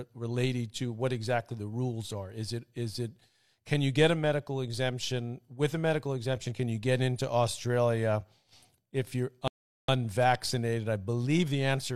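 At 9.48 s, just after "if you're", a rebuffering stall drops the speech into silence for about 0.41 s. Playback then resumes exactly where it stopped.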